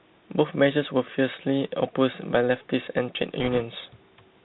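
Speech carried through a Bluetooth CVSD headset codec, consistent with a 64 kbps link: nothing above 4 kHz, scratchy s sounds and granular hiss, unlike ordinary telephone band-limiting, which stays clean. From 3.40 to 3.62 s, bit errors on a Bluetooth voice link, at roughly one or two percent, add a rushing crackle rather than the loud clicks of packet loss.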